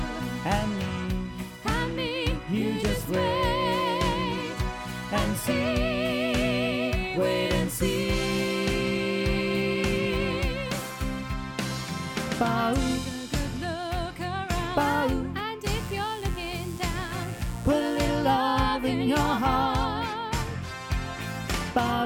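From 15.64 to 18.06 s, mains buzz: switching spikes from 60 Hz wiring leak in, adding a raspy, harmonic-rich buzz about 20 dB below the sound.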